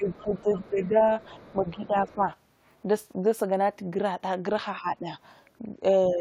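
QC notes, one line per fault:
0.00–0.47 s, 0.69–1.09 s, 1.37–2.23 s, 4.78–5.09 s, 6.13–6.20 s: speech suppressed in double talk. The talker's voice ducks by roughly 10 dB, deepest near 4.8 s, likely an echo canceller attenuating both overlapping talkers.
0.11–0.87 s, 1.21–1.53 s, 2.08–2.14 s: other side's voice leaking through. A faint second, separate voice sits far beneath the talker, likely loudspeaker residue the canceller missed, not a reverberant echo of the talker.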